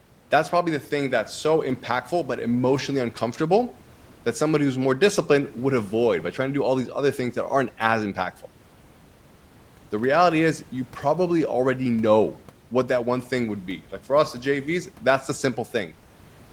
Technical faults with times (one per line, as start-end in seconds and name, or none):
none